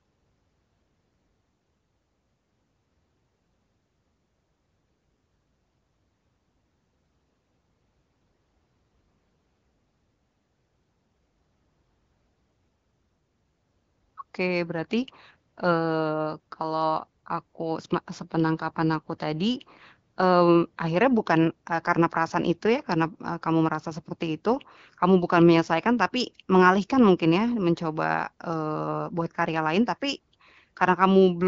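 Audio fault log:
No faults heard anywhere in this speech recording.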